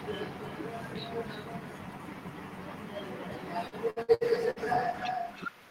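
Echo with no canceller runs through the whole speech clip. The far end appears to be playing the call over a loudspeaker, its microphone picks that sound up again, and nothing subtracts it before it is sent back. Every phrase returns roughly a third of a second later as a copy about 6 dB quieter and thinner, so the talker seems to be followed by a double of themselves.

Repeated packet loss (robotic sound) begins at 3.67 s and lasts until 4.59 s. Audio data went missing in five separate gaps, the longest 64 ms. Each time, the receiver bridged the hole by stretching the last sound it had, which covered about 290 ms. Another 240 ms simply dropped out. With nearly a third of the stretch synthesised, the speech turns choppy, with short pieces vanishing between fills.

A call bitrate drop sets in at 4.21 s, overlapping the loss, and continues to the end. The encoder was pushed to spend far fewer bits, consistent with a fall from around 40 kbps to about 18 kbps, and it held at its lowest for roughly a second. 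Coarser coding makes the speech rough and watery, and the top end dulls as high frequencies are trimmed away.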